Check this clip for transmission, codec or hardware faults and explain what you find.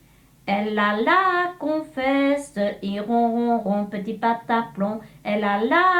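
One fault is audible: a corrupt frame decoded, from 2.68 to 2.74 s. For about 60 ms, roughly three consecutive compressed frames carry flipped bits that the decoder plays back as if valid, so misread codes and gains push energy into the wrong frequency bands. The result is a short glitch peaking near -25 dBFS. Unlike a dropout or concealed loss, the sound doesn't smear. Instead, foreign energy appears at the wrong frequencies, confined to frame-length steps.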